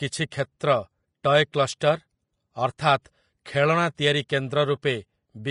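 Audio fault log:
Throughout, Vorbis compression: the speech is hissy and grainy, with consonant attacks smeared and nothing above 10.6 kHz. It's likely a low-quality Vorbis encode, fitting about 31 kbps, with treble quantised so coarsely that fine detail turns to noise.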